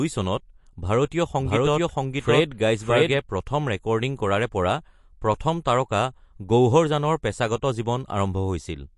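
From the start and throughout the speech, the sound is watery and swirly, with a metallic chirp on s sounds and smeared attacks, and nothing is present above 11.3 kHz. The likely cause is MP3 compression at a low rate, which fits roughly 48 kbps: short of bits, the encoder cuts the treble at a fixed point and drops weak frequency lines that flicker between frames. That flicker sets it apart from a plain low-pass filter, which dulls the sound without any swirl.

Between 1.39 and 3.17 s, a second full-band copy of the speech runs alongside the first, about as loud and roughly 0.7 s behind, so phrases overlap. This is a doubled audio track, likely from the same signal being mixed in twice, with one copy out of step. Unlike an echo or room reflection, the copy doesn't decay or pick up any room colour, and it starts and stops abruptly at those edges.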